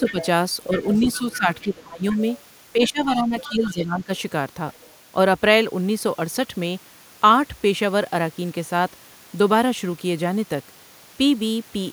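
A speech recording where the first five seconds get messy. From 0.02 to 2.19 s and again from 2.73 to 4.1 s, the talker's level sags in bursts, about 20 dB at worst in the first stretch and about 15 dB in the second, adding up to roughly a second each time. That's speech suppressed in double talk, likely the echo canceller ducking everything because both ends were talking at once. Overlapping that, from 0.06 to 2.16 s and 2.83 to 4.96 s, there's the other side's voice leaking through underneath, about 15 dB and then about 20 dB below the talker, likely residual loudspeaker echo the canceller didn't fully remove from the mic.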